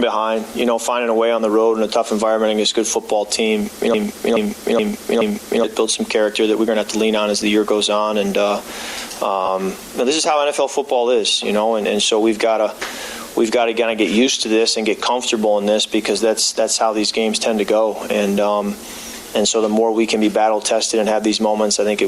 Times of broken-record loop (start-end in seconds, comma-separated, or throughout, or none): 3.94-5.64